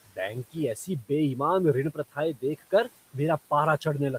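From 1.94 to 2.17 s, just before "देख कर", the speech is cut by the noise suppressor. The suppressor mistook quiet parts of the speech for background noise and turned them down with it. The deepest dip is about 15 dB. Only about a tenth of a second is affected in total. Soft sounds there seem swallowed and faint. The room noise, about 21 dB below the speech, drops away with them.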